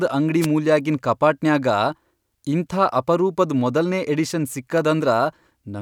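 At 0.41 s, lasting about 62 ms until 0.47 s, a wireless microphone noise hit cuts across the speech just before "ಮೂಲ್ಯಾಗಿನ್ ಕಪಾಟನ್ಯಾಗ". The FM radio link briefly faded as reflected signals cancelled, letting receiver noise surge up. It is heard as a short swish of static over the voice.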